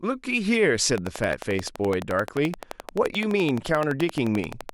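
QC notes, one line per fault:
0.98–4.70 s: train of clicks. About forty regular clicks, 11.6 per second, roughly 10 dB above the speech. Likely electrical interference injecting pulses.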